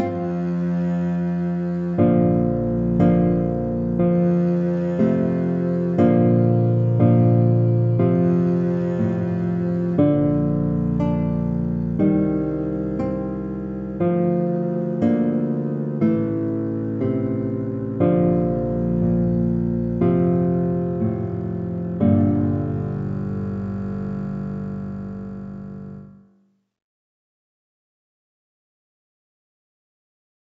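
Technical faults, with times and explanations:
No technical faults can be heard in this audio.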